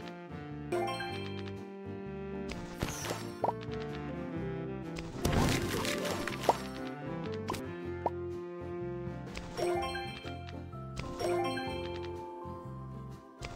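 At 0.72, 3.04 and 7.60 s, damaged data in a compressed stream makes the decoder misread corrupted frames and lose sync, giving brief chirps or squawks. Each shows as a thin vertical broadband streak on a spectrogram and a sudden glitch in the waveform.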